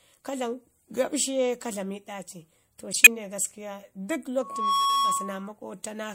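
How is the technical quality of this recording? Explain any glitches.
The recording has two clear faults: a brief digital burst and a feedback squeal.

From 2.92 to 3.07 s there is a corrupt frame decoded. Flipped bits in a run of compressed frames were played anyway. Misread gains and codes scatter energy to wrong frequencies. It sounds like a harsh, loud noise blip peaking around -5 dBFS.

From 4.41 to 5.48 s a loudspeaker feedback squeal appears. The microphone picks up its own loudspeaker, and the loop gain exceeds one at 1.1 kHz. The tone swells over about a third of a second. It then howls well above the speech.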